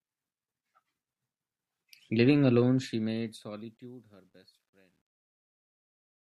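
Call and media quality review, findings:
Truncation distortion on the fade-out, 2.55 s to clip end. Gritty texture as the level drops, worst from 4.05 s. Probable component: undithered gain stage, which fits about 11 bits. Low-level waveform collapses into coarse steps.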